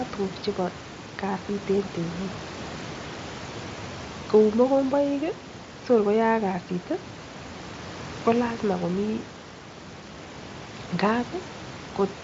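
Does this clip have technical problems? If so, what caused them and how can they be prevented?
No, no technical problems here.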